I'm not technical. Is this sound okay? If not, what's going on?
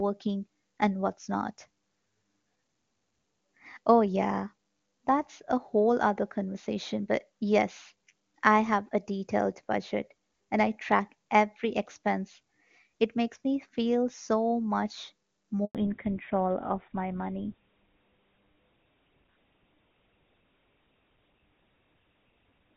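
No. At 15.65 s there is a handover gap: the call was passed between networks, and for about a tenth of a second, until 15.75 s, no speech got through. The voice dies away quickly, and whatever was said in that moment is lost.

Right after, from 15.75 s to the end, comes a fallback to narrowband. Before this the call ran in clear HD Voice; afterwards the connection switched to an older phone codec that carries nothing above 4 kHz, so the voice sounds duller and rougher.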